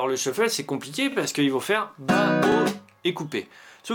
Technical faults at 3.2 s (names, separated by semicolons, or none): none